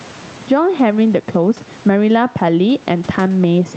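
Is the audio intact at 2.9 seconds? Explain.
No. At 2.9 s the clip shows gain pumping, which runs through the whole speech clip. The gain swings by around 10 dB, pulled down on every loud sound, likely from gain set far too high with a fast limiter clamping it down. On a waveform the peaks look flattened and loud and soft parts sit closer in level. On a spectrogram the room noise, about 32 dB below the speech, sits under a ceiling at 8 kHz.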